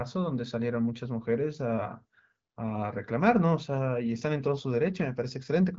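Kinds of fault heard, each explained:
No faults are audible anywhere in this speech clip.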